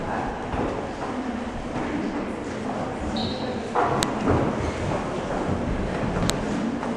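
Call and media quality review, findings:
File header played as audio: WAV headers left in at segment joins, decoded as samples. Sharp loud click at 4.03 s and 6.30 s, independent of signal.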